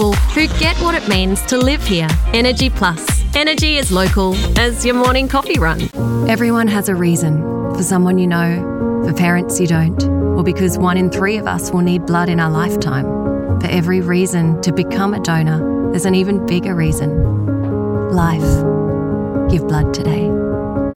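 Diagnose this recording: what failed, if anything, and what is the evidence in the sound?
From 3.81 s to 6.63 s the sound turns grainy, with distortion that tracks the signal, sitting roughly 30 dB below it. This likely points to sample-format conversion: low bit depth without dither, rounded to about 7 bits. Undithered error moves with the signal, unlike steady dithered hiss.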